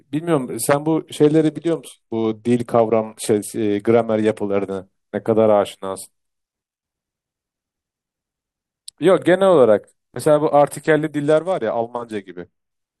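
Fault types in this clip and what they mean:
Bluetooth SBC bit pool drop: at 0.99–4.78 s and 11.23–12.71 s, treble dulls and grit rises as squeezed encoding starves upper sub-bands.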